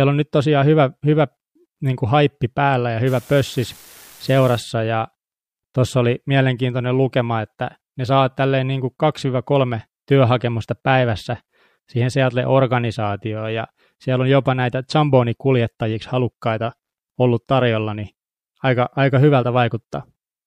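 A speech recording with an unreliable data bit between 3.07 and 4.61 s, just after "kuin haippi päällä ja". For that stretch one line of the digital sample path is marginal, so its bit flips in a random share of samples. Each flip adds a spike of identical size, about -30 dBFS, giving a steady fizzy crackle laid over the sound. Because the error is in the data rather than the signal, the crackle does not follow the level and persists through any pause.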